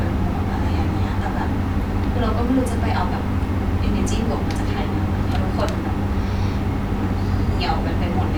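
Listening through the speech from beginning to end, nothing stood out as a technical problem at any point.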